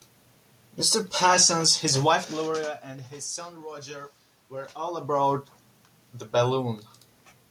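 No system faults; the room noise belongs to the recording, and the level shifts near 2 s and 4.5 s are the talker moving relative to the microphone.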